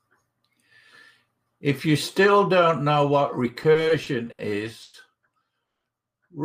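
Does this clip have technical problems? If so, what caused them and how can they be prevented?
Yes. From 3.63 to 4.41 s the speech shows repeated stalls (stutter): five short gaps, the longest 70 ms, about 160 ms in all and about a fifth of that stretch, bridged by stretching the last sound. Unlike a single freeze, it drags in many small hitches, with nothing lost, because packets kept arriving slower than playback. A jitter buffer that adapts its depth to steady late arrival would prevent it.

Two call audio freezes follow. At 4.83 to 4.96 s there is a 110 ms continuation of the preceding sound, and at 5.66 to 5.87 s a 190 ms one that fades to near silence for about 180 ms. Each is a single held pause rather than a stutter, and the speech resumes intact afterward. The likely cause is a burst of network delay that emptied the jitter buffer. Prioritising call traffic and avoiding congested links would prevent these pauses.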